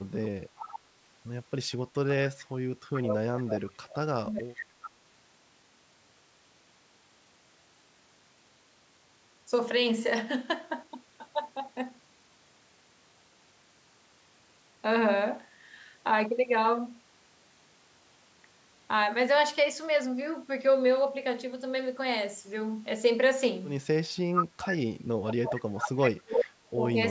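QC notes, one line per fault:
0.56–0.79, 1.72–3.95, 4.57–4.90, 24.33–24.68 and 25.26–25.87 s, echo leak: a copy of the talk returns about 0.42 s after the original, each time with the same delay. It is quiet in the first and third bursts, stronger from 1.72 to 3.95 s, roughly as loud as the speech at 24.33 s, and somewhat below it at 25.26 s. The fixed delay points to loudspeaker sound reaching the far-end microphone and likely getting past an incomplete echo canceller.
4.21–4.66 and 25.36–26.96 s, speech suppressed in double talk: the main speech drops sharply while the far side's sound plays on the loudspeaker. It falls about 30 dB for roughly half a second in the first span and about 35 dB over roughly 1.5 s in the second, so parts of the speech fade or vanish. The canceller likely could not separate the talker from the returning echo during simultaneous talk and turned the whole signal down.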